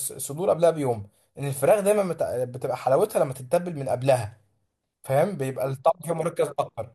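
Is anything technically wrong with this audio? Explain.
No, nothing technically wrong can be heard here.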